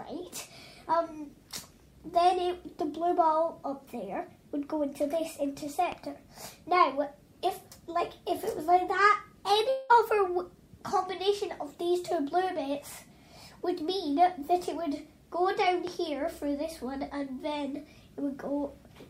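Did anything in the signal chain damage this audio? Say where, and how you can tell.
Yes. Analogue wiring, most likely a plug, switch or static discharge, put two loud pops on top of the audio, at 5.92–5.94 s and at 15.87–15.89 s. Each is a single sharp pulse about 20 ms long that peaks well above the surrounding level: roughly 5 dB over the signal for the first and about 10 dB for the second. The audio continues unbroken underneath both, which shows a voltage step being added to the signal rather than any loss of audio.

The network stage caused a long network dropout from 9.69 to 9.91 s. About 200 ms of audio never arrived, most likely because packets were lost or delayed in transit. The receiver filled almost the whole gap by extending the last sound it had as a fading buzz or hiss, so no true silence is heard. The audio then resumes further on, with that stretch of content gone.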